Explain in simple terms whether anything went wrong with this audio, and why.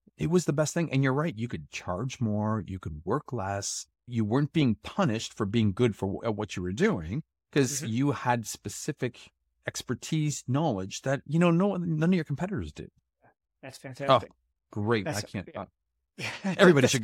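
A loud pop hits at 7.58 s, just after "what you were doing", well above the speech, likely a plug or switch glitch. Unlike a dropout, the speech continues underneath.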